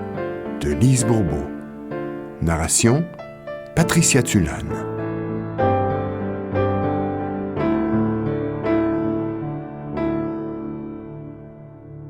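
The audio switches abruptly at 4.68 s and stays degraded to the end, with codec artefacts rising and no gap at the switch. That points to an adaptive stream at a lower bitrate, consistent with a drop from 64 to 16 kbit/s Opus. The seamless step change, rather than a dropout or gradual filtering, sets it apart.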